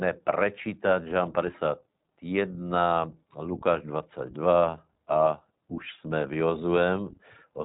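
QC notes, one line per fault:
Throughout: iLBC codec. The band stops near 3.8 kHz, and each 20 ms frame is coded independently, leaving plainly audible roughness and a synthetic edge, consistent with 15.2 kbps.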